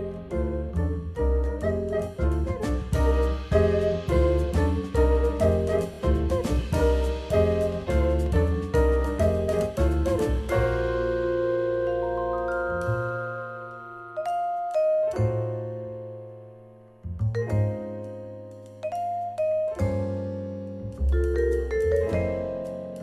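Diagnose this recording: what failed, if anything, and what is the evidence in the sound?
Repeated frames at 5.93 to 5.99 s: one 26.1 ms block plays twice more, a quick stutter adding 52.2 ms, which fits compressed frames duplicated in storage or transfer.

A train of clicks from 7.40 to 8.27 s: around seven uneven ticks, about 5.8 per second, near signal level, likely interference in the analogue wiring.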